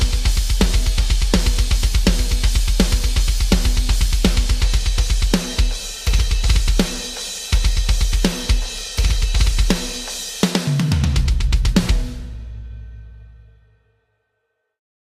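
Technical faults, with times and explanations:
Nothing stood out as a technical problem on listening to this audio.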